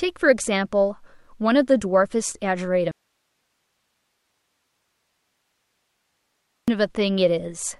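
At 2.91 s the speech cuts off abruptly and only a faint hiss remains, roughly 50 dB below the signal, until it snaps back at 6.68 s. This audio dropout to a faint residue lasts about 3.77 s, likely from the signal being lost while the downstream path stayed live.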